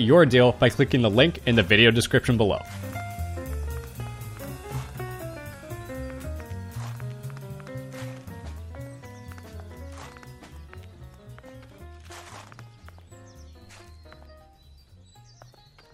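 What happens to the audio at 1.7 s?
Nothing goes wrong at 1.7 s; the audio plays straight through that moment intact, with no dropout, click or distortion.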